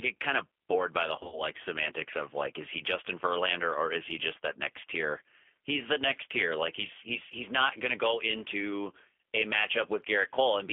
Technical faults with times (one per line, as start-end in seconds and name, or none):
0.00-10.72 G.729 codec
1.16-1.42 VoIP packet loss concealed by the speech codec